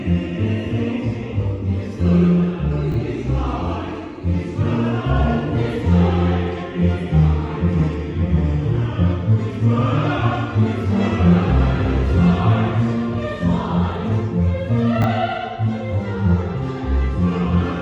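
At 2.92 to 2.95 s and again at 15.02 to 15.04 s, chunks play out of order. A 10 ms block arrives late, two blocks behind at first, one behind later. Nothing is lost. The misplaced slice creates hard joins, heard as a brief jumbled moment.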